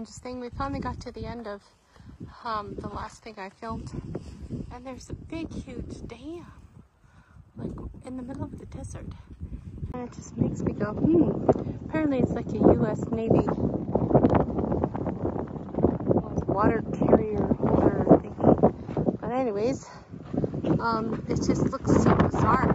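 From 0 to 6.0 s, an adaptive stream starting at a low bitrate leaves nothing above 14.9 kHz. At 6.0 s the spectrogram's upper edge fills in abruptly, with no gap.

At 9.92 s a 20 ms silence appears in the waveform, then everything above 7.6 kHz vanishes under a faint new noise floor, most likely the input switched to a poorer device.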